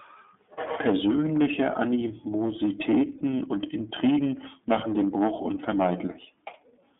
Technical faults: iLBC codec; lost iLBC frames

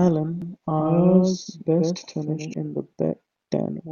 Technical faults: doubled audio track

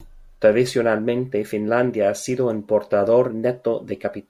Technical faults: none

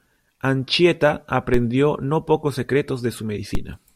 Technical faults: DC step

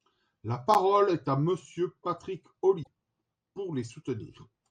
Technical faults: broken MP3 bit reservoir

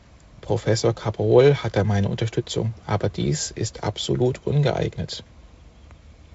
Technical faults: none

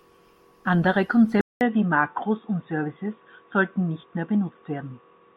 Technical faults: input switched to a poorer device

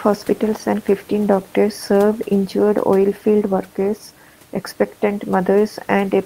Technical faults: none

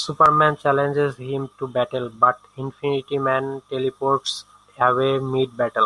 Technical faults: none

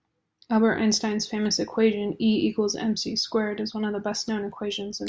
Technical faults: none

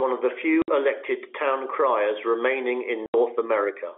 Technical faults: packet loss filled with silence

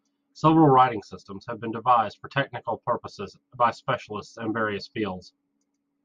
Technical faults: none

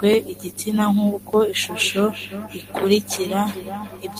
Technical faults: feedback echo between two devices

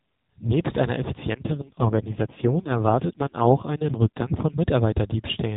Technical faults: AMR rate drop

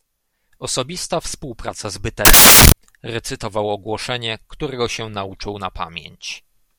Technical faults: samples built from the wrong bytes

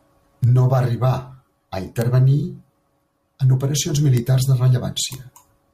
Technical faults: bit error spike

